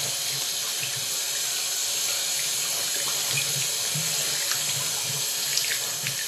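From start to finish the treble is missing: nothing comes through above 14.2 kHz, and what sits just below that is grainy and hissy, with tones that sound roughened and attacks that blur. That's plainly audible codec damage, most likely Vorbis compression at a low setting, which fits a bitrate somewhere around 37 kbps. The coder kept the broad spectral shape, but it quantised the upper detail so coarsely that it turned into noise of similar energy.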